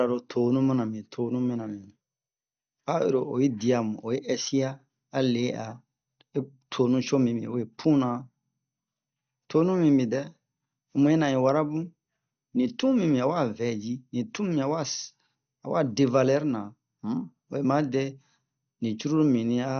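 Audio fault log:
Throughout: MP2 compression, the likely cause of dull, gurgling, granular speech whose upper sub-bands are switched off, leaving nothing above 6.5 kHz, consistent with a low bitrate near 48 kbps. A spectrogram shows a hard ceiling at 6.5 kHz and blocky, flickering bands beneath it.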